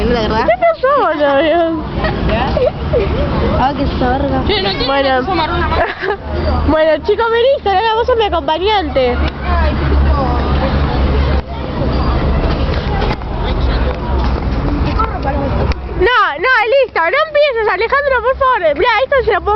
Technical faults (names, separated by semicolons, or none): call bitrate drop